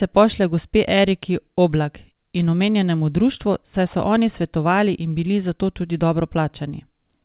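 No faults turn up anywhere in this speech recording, and the only thing worth noting is the call path it came through, which leaves nothing above 4 kHz, just what you'd expect from a narrowband telephone codec like G.711.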